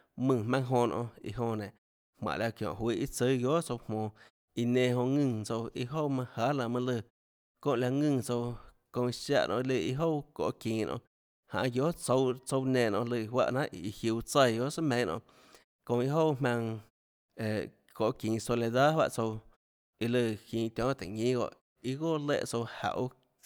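No technical faults can be heard anywhere in the speech.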